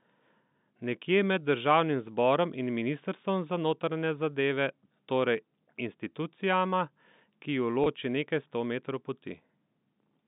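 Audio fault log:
7.84–7.86 s, packet loss with pitch repetition: just before "nekaj sto metrov" about 20 ms of audio drops out, which fits a single lost packet, and the receiver fills the hole by repeating the last pitch period. The gap is too short to fade to silence, so it is heard as a brief held, buzzy tone. On a waveform, identical periodic cycles repeat across the gap. On a spectrogram, harmonics run flat and unchanging for that instant, all within the 150 Hz to 3.7 kHz telephone band.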